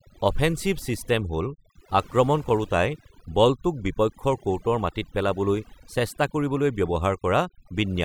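From start to finish the speech carries overdone noise removal: a noise reducer pushed too hard has switched off frequency bands sitting near its noise estimate, taking softer parts of the voice along. The gaps drop away and break up into twinkly specks.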